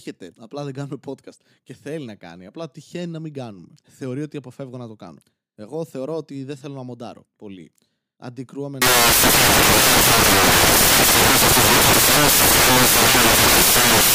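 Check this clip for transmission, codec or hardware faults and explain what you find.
From 8.82 s to the end, samples built from the wrong bytes: misassembled sample bytes push fast-changing low bits to the top, giving loud, harsh broadband noise.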